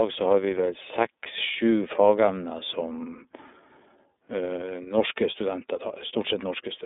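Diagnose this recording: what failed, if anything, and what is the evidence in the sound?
The fault sits at the codec stage, and it lasts the whole speech recording. The sound is the iLBC codec at work. The band runs from about 250 Hz to 3.7 kHz, and nothing passes above 3.8 kHz. The coding damage is plainly audible as a rough, slightly synthetic texture. Each block of about 30 ms is coded on its own, which fits iLBC's 13.33 kbps mode.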